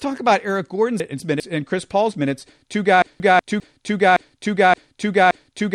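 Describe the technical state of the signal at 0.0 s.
At 0.0 s the speech signal is intact, with no audible technical fault at that moment.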